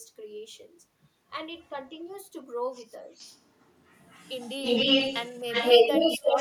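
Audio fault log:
1.59–1.69 s, echo leak: a very faint copy of the speech returns 263 ms late, likely from a far-end echo canceller letting a scrap of loudspeaker pickup through.
3.11–6.40 s, echo leak: a delayed copy trailing 263 ms behind, louder than the original speech, likely because the far-end canceller failed to suppress loudspeaker sound reaching its microphone.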